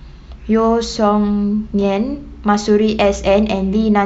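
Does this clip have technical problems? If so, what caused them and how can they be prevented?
No, this clip has no technical problems, so there is nothing to trace to a cause or prevent.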